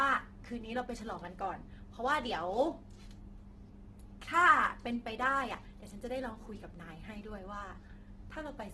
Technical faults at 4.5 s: Opus compression

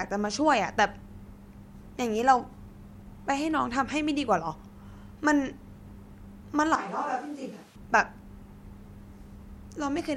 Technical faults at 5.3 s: none

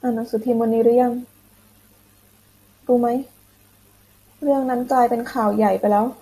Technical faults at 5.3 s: none

